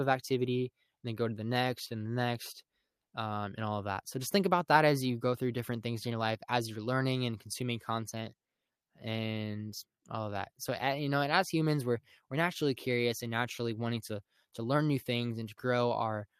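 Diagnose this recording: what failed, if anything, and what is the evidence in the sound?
Nothing in this speech recording stood out as a failure on listening.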